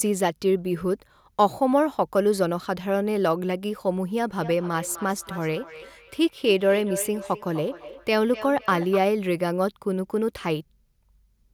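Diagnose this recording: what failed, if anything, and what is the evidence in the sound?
Feedback echo between two devices, slipping past call-processing echo cancellation: from 4.29 to 9.08 s, speech recurs roughly every third of a second, about 14 dB down, replayed by a second device.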